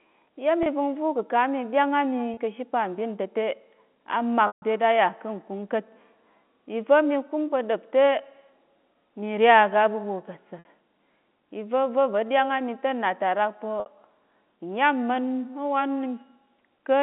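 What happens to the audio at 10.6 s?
Right after "aga aɓuɓwo ka̱ ta", from 10.59 to 10.65 s, there's packet loss with pitch repetition: about 60 ms went missing, which fits two packets dropping out. The receiver loops the last pitch period and fades it, so you hear a brief buzzy hold that thins toward silence before the speech cross-fades back in.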